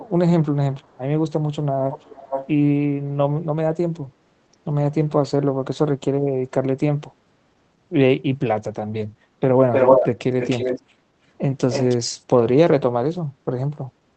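A delayed copy of the speech trails behind it at 0.80 s (barely audible), 1.91 s (clearly heard, 467 ms late), 9.72 s (louder than the speech itself), and 10.39 s and 11.70 s (slightly quieter), those last three 307 ms behind. This is echo leak, likely from a far-end loudspeaker whose echo canceller let its microphone pickup return. Between them, at 9.25 s and 11.05 s, the room tone briefly dips by about 5 and 6 dB for under a tenth of a second. That is background gated by the echo canceller, which pulled the microphone down while the loudspeaker played.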